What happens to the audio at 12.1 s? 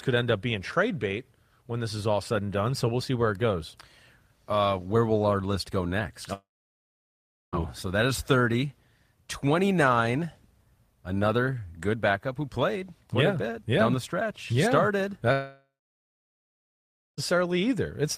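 Nothing goes wrong with the audio at 12.1 s; the speech carries on intact through that moment with no audible fault.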